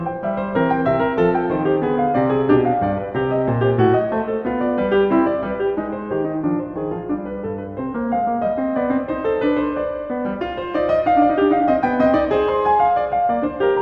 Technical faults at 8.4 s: none

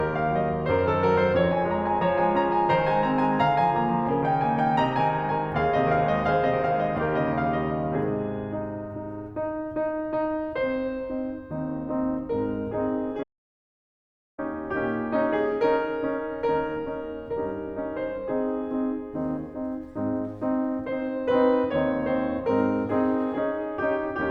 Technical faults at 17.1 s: none

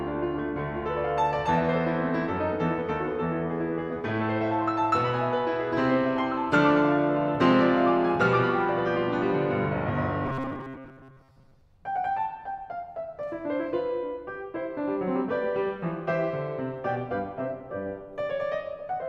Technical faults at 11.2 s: robotic sound from repeated short buffers

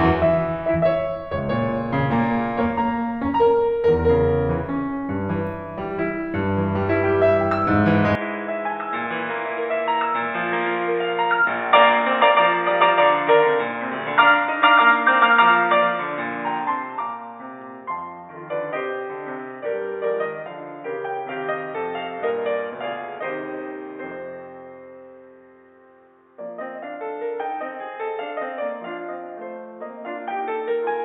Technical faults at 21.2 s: input switched to a poorer device

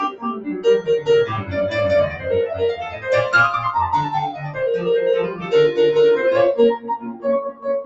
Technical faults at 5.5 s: noise suppressor applied to music or sounds; sound cut by the noise suppressor

